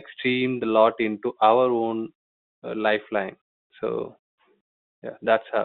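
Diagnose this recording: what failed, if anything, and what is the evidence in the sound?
Nothing has failed in this speech recording. What can be heard is an ordinary G.711 telephone path, with the sound confined to a line band of roughly 150 Hz to 3.7 kHz and at most a faint trace of the codec's level-following quantisation noise.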